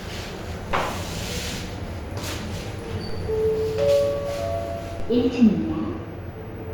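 DC steps at 0.71, 3.09 and 5.00 s: the waveform's zero line jumps abruptly, each time heard as a low thump, then the offset drains away slowly, as through a 2 Hz high-pass.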